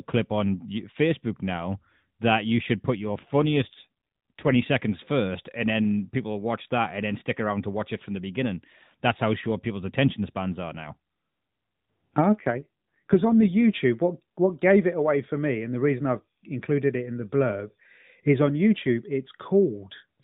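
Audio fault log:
3.00–4.64 s and 12.35–13.61 s: AMR rate drop. The codec steps down to fewer bits, consistent with 12.2 to 5.9 kbps, so speech turns rougher and more synthetic, without gaps.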